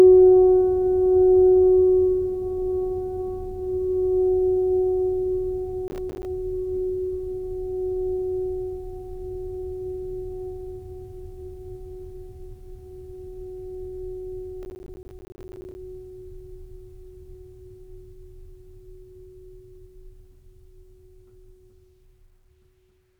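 At 5.88 to 6.25 s the music breaks into processor overload crackle, and it returns more heavily from 14.63 to 15.75 s. The processor falls behind its audio deadlines, so buffers of around 10 ms go out as silence, leaving dense hard-edged gaps: over a dozen in the first burst, dozens in the second. Unlike a single dropout or clipping distortion, it is a rapid gritty tearing that stops cleanly once the load eases.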